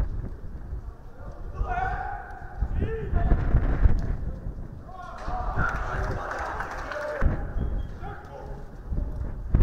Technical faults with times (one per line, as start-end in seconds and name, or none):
3.88-4.47 drift correction step